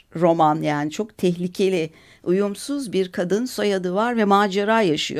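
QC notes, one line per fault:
No technical faults are audible in the signal at any point.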